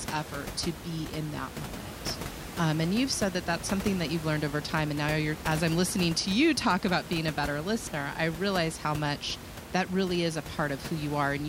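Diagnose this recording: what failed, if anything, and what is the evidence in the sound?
Nothing in the chain has failed: the only thing under the speech is the room's own background noise, sitting about 11 dB down, which belongs to the recording rather than to any stage of the system.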